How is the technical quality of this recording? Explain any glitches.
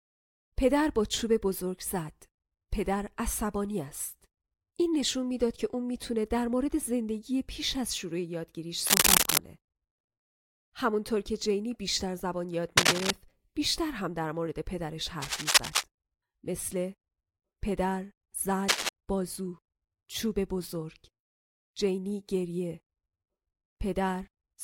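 The speech is interrupted by four bursts of cable scratch noise, at 8.86–9.39 s, 12.77–13.11 s, 15.21–15.83 s and 18.68–18.89 s. The likely cause is a worn connector or cable being moved, which makes its contact resistance jump erratically. The result is a rough scratching, about 10 dB above the speech in the first burst and about 5 dB in the others. On a spectrogram these appear as dense broadband smears, and on the waveform as ragged, spiky clusters.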